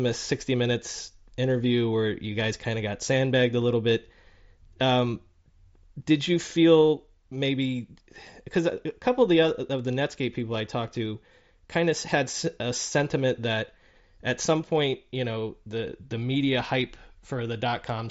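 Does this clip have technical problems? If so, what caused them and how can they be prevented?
No, the speech comes through as expected for a Bluetooth mSBC headset link, its wideband top end stopping around 8 kHz as that codec does, so there is nothing to trace or prevent.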